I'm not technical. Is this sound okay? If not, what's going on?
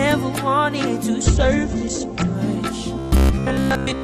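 No. From 1.26 to 2.47 s there is a call bitrate drop: the connection briefly sent far less data, so the sound turns rough and muffled, losing detail above 8 kHz. From 2.99 s to the end there is robotic sound from repeated short buffers: a rigid metallic buzz near 67 Hz, likely because audio arrived too slowly and the software kept repeating tiny 15 ms pieces in place of most of the real sound.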